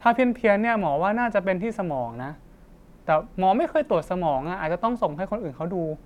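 Nothing in the speech stood out as a technical fault on listening.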